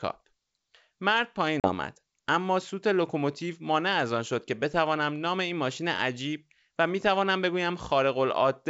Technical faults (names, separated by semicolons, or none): packet loss on an ADPCM call